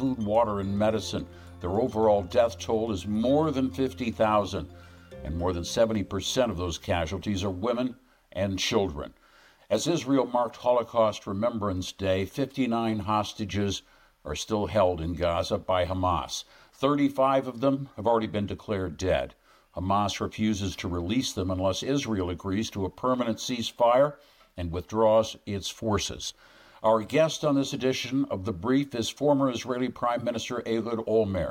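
No technical faults can be heard anywhere in the audio.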